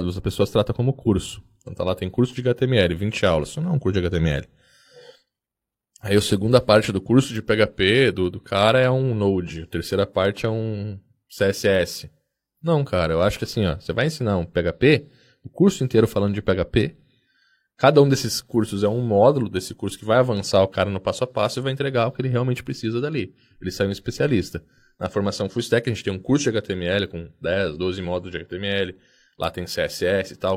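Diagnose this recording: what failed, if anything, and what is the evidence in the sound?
Nothing in the recording points to a failure at any stage of the signal chain: the speech signal stays continuous and intact, with no audible breaks, distortion, level jumps or timing irregularities.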